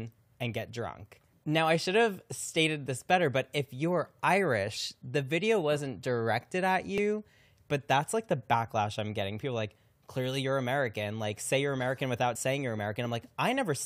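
Three brief jumps interrupt the speech: at 4.73 to 4.78 s just before "the video wasn't directed", at 6.98 s right after "video wasn't directed at", and at 12.34 to 12.37 s just before "saying you're". Each time the audio lurches forward by about 20 ms. These are compressed frames skipped: whole coded frames were missing or rejected by the decoder.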